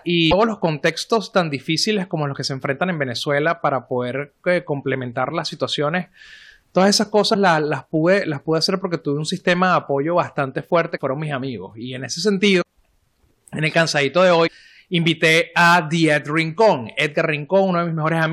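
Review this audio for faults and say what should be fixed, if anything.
A broken MP3 bit reservoir is the likely cause: frames appear to be missing from the stream, so the next frame reaches back into the reservoir for data and decodes another frame's bytes instead. The sound skips ahead with a brief disturbance, a chirp, noise burst or gap, at 0.30–0.33 s, 7.33–7.36 s, 10.96–10.99 s (between "de apoyo bastante fuerte" and "mis amigos"), 12.61–12.63 s (after "en ese") and 14.46–14.49 s (between "en el cansadito de" and "invité a"). Each lasts about one 26.1 ms frame. To prevent it, cut or splice MP3 streams only after decoding, or with a bit-reservoir-aware tool, and make sure the transport does not drop frames.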